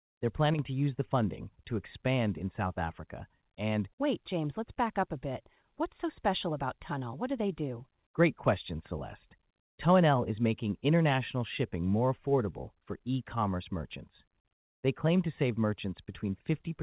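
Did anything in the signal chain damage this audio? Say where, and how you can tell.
Yes. A one channel drops out fault, likely at an intermittent stereo lead or connector, runs from 0.54 to 0.59 s, just before "to use the funding". The mono sum loses about 6 dB for 50 ms. The waveform steps down in level, and the spectrogram, empty above 4 kHz from the call path, dims across every band at once.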